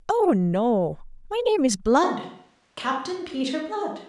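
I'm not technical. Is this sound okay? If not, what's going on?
No. From 2.05 s to the end, the recording likely falls back from the close microphone to one further away, a switch to a distant microphone. The speech suddenly turns roomy and hollow with less bass and a little more background noise, though loudness stays about the same.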